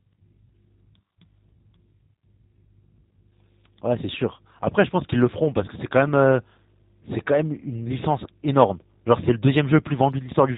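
G.729 codec coding runs through the whole clip: the speech is rebuilt from a vocal tract filter, a pitch predictor and a few pulses per frame, so the band stops at 4 kHz and the voice sounds plainly rough and synthetic, which fits an 8 kbit/s G.729A stream.

VoIP packet loss concealed by the speech codec occurs from 5.66 to 5.68 s. The decoder filled a gap consistent with a single lost 10 ms frame by extending its last pitch and filter at falling gain, giving a brief fading smear, with the following sound weak or distorted as the codec recovers.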